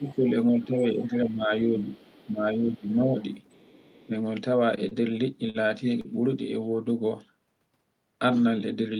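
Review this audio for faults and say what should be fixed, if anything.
Speech suppressed in double talk occurs at 0.00–0.26 s, 0.52–1.51 s, 1.72–1.91 s, 2.25–3.18 s and briefly at 4.07–4.11 s. The talker's level sags, by up to about 15 dB in the first stretch, about 10 dB in the two longer ones and about 5 dB in the short ones. This is likely an echo canceller treating simultaneous far-end speech as echo and attenuating everything. Prevention: tune the double-talk detector so near-end speech holds the suppressor open.

The other side's voice leaking through is audible at 0.08–0.16 s, 1.94–2.25 s and 3.46–4.07 s, sitting about 30 dB below the talker as a faint second voice. Residual loudspeaker pickup is likely getting past the echo canceller. Prevention: improve echo-path modelling and residual echo suppression, or reduce loudspeaker level relative to the microphone.

Short stalls from a late packet occur at 4.88–4.94 s and 5.50–5.63 s. 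In each, a sound is held too long, by about 32 ms and then 46 ms, as the jitter buffer ran dry and the receiver stretched the last audio until the packet arrived. Nothing is lost, but playout delay jumps by the same amounts, heard as a brief drawn-out hitch. Prevention: give the adaptive jitter buffer more headroom for network delay spikes.

A short concealed packet loss sits at 6.01–6.09 s. About 40 ms of audio never arrived and was filled with roughly 38 ms of synthesised continuation before blending back into real signal. It comes across as a brief smear where the sound wobbles rather than cutting off. Prevention: enable forward error correction or redundancy in the codec so isolated lost packets can be reconstructed.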